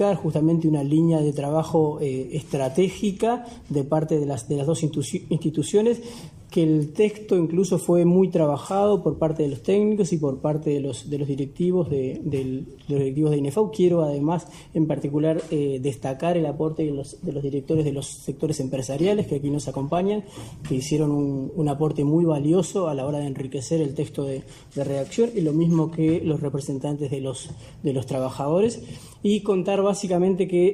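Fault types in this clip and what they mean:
call bitrate drop: From 16.44 s to about 22.15 s the sound turns coarse and watery, with the top end dulled and muffled, before clarity returns. The call's bandwidth estimate fell and the encoder was told to spend far fewer bits, so it coded the audio more crudely and cut away high frequencies. The degradation fits a fall from around 96 kbps to about 22 kbps, held at its worst for roughly 5.6 s before the bitrate recovered.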